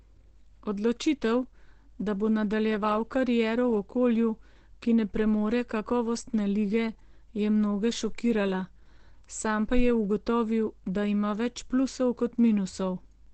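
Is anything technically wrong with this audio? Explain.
Yes. Throughout, the signal was likely squeezed through Opus compression in its speech (SILK) mode, at a rate that sounds like about 12 kbps. That leaves the speech muffled and hoarse, with nothing above about 8 kHz. At 8.30 s, likely dropped samples, just a handful lasting a tiny fraction of a millisecond, make the waveform jump and produce a single sharp click.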